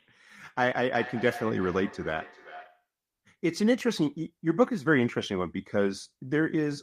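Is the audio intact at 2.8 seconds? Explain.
No. A feedback echo between two devices runs from 0.95 to 2.87 s. Another device in the room replays this speech, and the microphone picks it up again. Each word returns roughly every 0.4 s, thinner and ringing, at about 15 dB below the speech.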